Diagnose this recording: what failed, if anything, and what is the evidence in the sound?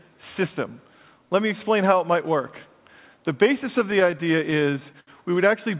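Network and jitter buffer trouble: repeated stalls (stutter) from 3.8 to 5.09 s, thirteen hitches, the longest 70 ms. Packets arrived late, the buffer kept running dry, and the receiver stretched the last sound to bridge each gap, so it drags without losing anything.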